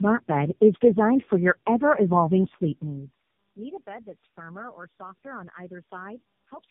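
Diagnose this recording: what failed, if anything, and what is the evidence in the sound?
The failure is tandem speech coding in the call-processing and codec stage, and it runs through the whole clip. The speech is rough, muffled and warbly from start to finish, with nothing above about 3.5 kHz. That's more smearing than one narrowband coder leaves. It sounds like about three low-rate speech codecs in a row, AMR-NB among them, with a decode and re-encode at each link border. Every pass quantises the previous pass's artefacts again, so the damage stacks up.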